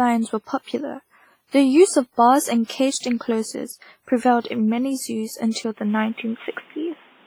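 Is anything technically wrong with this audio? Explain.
Yes, the speech carries three kinds of fault.

WMA compression runs throughout, heavily. The ringing, washy quality and a hiss that breathes with the signal point to a transform codec, likely WMA at around 24 kbps. Long blocks smear quantisation noise, and weak lines are zeroed. A spectrogram shows holes and blurred smudges.

Pre-echo occurs at 1.48 s (before "the use of bars"), 2.98 s, and 5.51 s (after "in many zoos"), spreading about 55, 52 and 47 ms. Noise sized for each late attack fills the block's quiet start, so a short hiss precedes a softened onset. It shows as a smear before each attack.

At 5.77 s, through to the end, the input switched to a poorer device, likely. Nothing passes above 3.8 kHz, and the level shifts by around 5 dB, with no gap at the switch. New background noise sits roughly 35 dB below the signal, so the sound turns duller. 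A spectrogram shows a sharp ceiling appearing.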